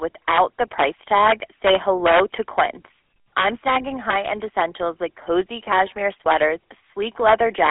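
From the start, the speech carries the GSM full-rate codec's signature: a buzzy, gravelly roughness. The codec rebuilds the voice from a vocal-tract model excited by sparse, regularly spaced pulses, and that coarse excitation is what makes it grate. The sound sits in a narrow telephone band of roughly 300 Hz to 3.4 kHz, with nothing above 3.7 kHz, which fits a 13 kbps GSM link. Unlike plain band-limiting, the damage is textural, not just muffled.

From 7.29 s to the end at 7.70 s, an integer overflow takes over. Loud peaks driven about 4 dB past the limit wrap around to the opposite sign instead of being held at full scale, so each excursion snaps across the whole range. The result is violent, sharp cracks on the louder moments. That makes them far harsher than clipping, which flattens the tops and sounds fuzzy, not explosive.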